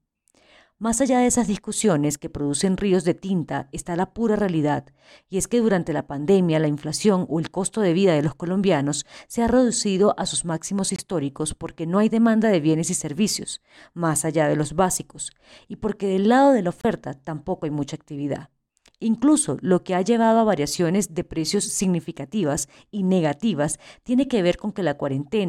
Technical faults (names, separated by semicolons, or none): Bluetooth dropout